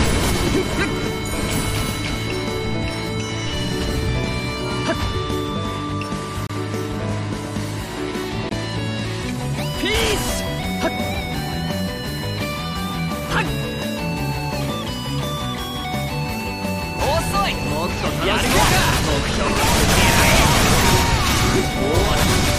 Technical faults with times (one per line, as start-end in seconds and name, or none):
6.47-6.50 gap between stream segments
8.49 gap between stream segments